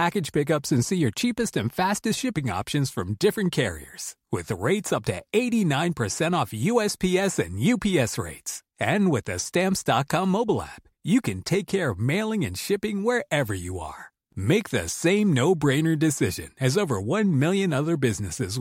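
Nothing stood out as a technical fault on listening to this speech recording.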